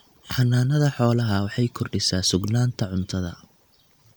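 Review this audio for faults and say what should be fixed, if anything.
Nothing here needs fixing, as no faults turn up anywhere in this speech clip.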